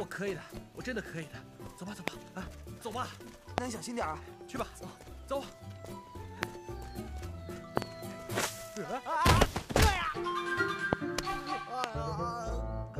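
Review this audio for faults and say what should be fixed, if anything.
A brief voltage pulse, likely from a plug, switch or static discharge, entered the signal chain six times. Each produced a loud pop about 25 dB above the sound at 2.08, 3.58, 6.43, 10.93 and 11.84 s, plus a double pop at 7.77–7.84 s. Secure and ground all connections and avoid switching equipment while recording.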